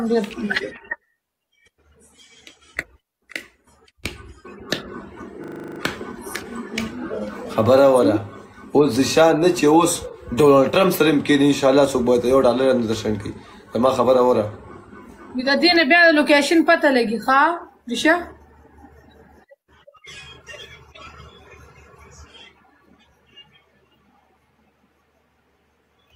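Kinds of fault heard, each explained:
System hang loop: from 5.44 to 5.8 s, one 40 ms slice repeats exactly nine times, a 25 Hz stutter; unlike a dropout, there is no silence.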